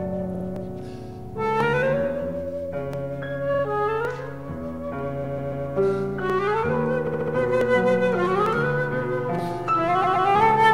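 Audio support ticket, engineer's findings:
Repeated frames: stutter at 0.34–0.45, 3.53–3.63, 5.23–5.65, 7.06–7.34 and 10.03–10.26 s. Compressed blocks are replayed 2–4 extra times. The waveform shows identical segments back to back.

Dropped samples: single sharp clicks at 0.56, 1.61, 2.94, 4.05, 6.30, 7.61, 8.46 and 9.39 s. A thin vertical spectrogram line at each, likely from under a millisecond of lost samples causing a waveform jump.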